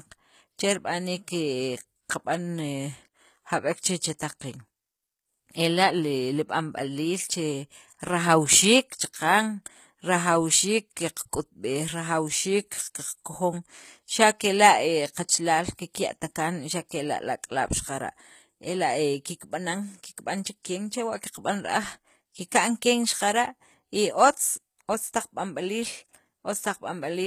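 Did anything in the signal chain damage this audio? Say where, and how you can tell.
Yes, the codec stage did the damage. The whole clip carries plainly audible coding artefacts, most likely from HE-AAC compression at a low rate; the texture fits something around 20 kbps. Nothing comes through above 14.9 kHz, and the top end that remains sounds synthesised rather than captured. The treble is being rebuilt by copying lower bands upward, so the sibilants come out gritty and metallic instead of clean.

The same codec also leaves pre-echo in three spots: at 4.00 s, at 4.19 s, and from 16.89 to 16.91 s. Each time a short hiss, 15 to 20 ms long, arrives just ahead of a sharp onset, and the attack itself sounds softened. That's the transform block spreading its quantisation noise, sized for the loud attack, back into the quiet moment before it.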